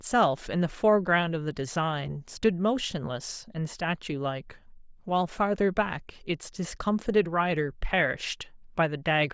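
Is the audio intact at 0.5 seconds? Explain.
Yes, the speech at 0.5 seconds plays through cleanly, with no dropout, click, distortion or other fault at that moment.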